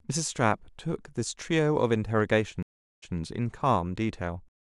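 Speech with a stream reconnect from 2.63 to 3.16 s. The connection drops for 0.40 s of silence, and a fresh decoder resumes 139 ms earlier, replaying a snippet.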